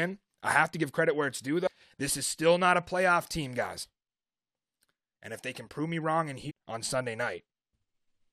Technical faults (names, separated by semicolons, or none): damaged data in a compressed stream